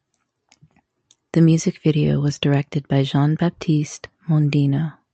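No technical faults occur anywhere in the speech, which reaches the listener through a working WebRTC call path.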